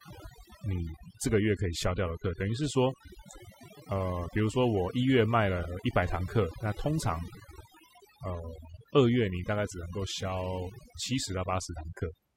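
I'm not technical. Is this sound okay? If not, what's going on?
No. Throughout the whole clip, from the first second to the last, there is overdone noise removal. A cleanup tool meant to strip background noise was turned up too far. It shuts off any slice of the sound that resembles its idea of noise, and the softer parts of the speech get cut along with it. The background drops and breaks up into twinkling, warbling specks.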